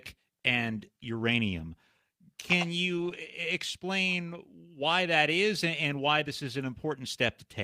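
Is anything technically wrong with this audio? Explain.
Yes. From 2.97 to 3.15 s, just before "explain why that is", the speech turns briefly rough and noisy: a lost packet rebuilt from error correction. About 100 ms of audio, which fits five separate lost packets, was played from the low-bitrate backup copies that Opus in-band forward error correction carries in each following packet. That avoids a gap, but the stretch is audibly coarser than the surrounding speech.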